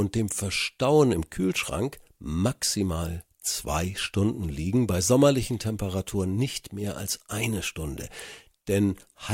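No audible technical faults occur anywhere in this recording.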